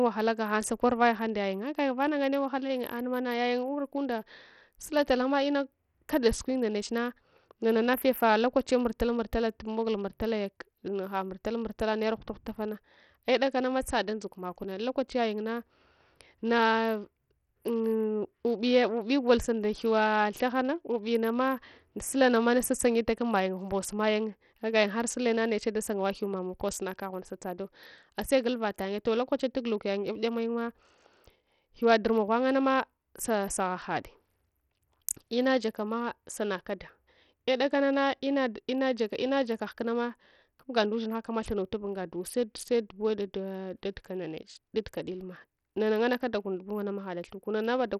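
A speech recording carrying Bluetooth SBC compression throughout, likely from a starved bit pool near 64 kbps: heavy gritty quantisation noise, flickering treble and nothing above 17.2 kHz. The coarse, band-wise grit, rather than MP3-style swirl or pre-echo, sets it apart.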